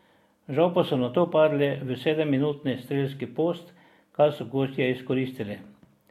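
No dropouts, glitches or distortion events turn up anywhere in the recording.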